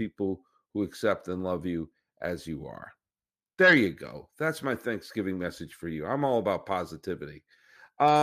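No technical faults can be heard anywhere in the recording; the speech signal stays continuous and steady throughout.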